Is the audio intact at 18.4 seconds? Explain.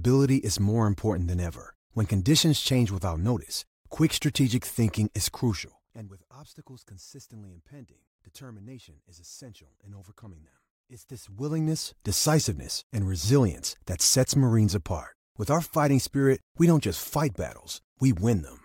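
Yes, the audio is intact at 18.4 seconds, with no fault present at that moment.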